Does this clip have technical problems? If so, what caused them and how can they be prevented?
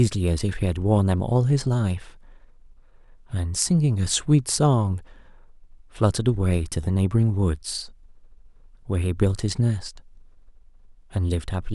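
No, there are no technical faults to report in this speech clip. Since nothing has gone wrong, there is no cause to trace and nothing that needs preventing.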